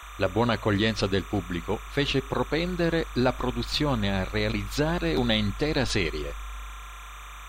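Linear timecode from a neighbouring track or cable is leaking into the speech for the whole clip, which fits 30-frame code. Its square wave flips between tones near 1 and 2 kHz, so a steady chirping warble sits roughly 20 dB beneath the voice.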